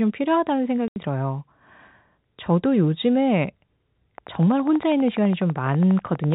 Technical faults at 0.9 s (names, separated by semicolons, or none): packet loss filled with silence